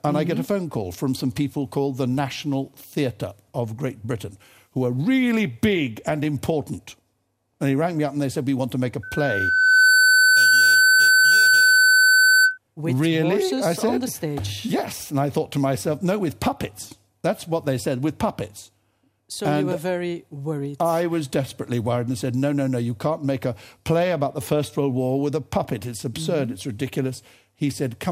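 A microphone picked up its own loudspeaker, causing a loudspeaker feedback squeal from 9.03 to 12.58 s: a 1.5 kHz tone swelling over about a second to roughly 10 dB above the sound.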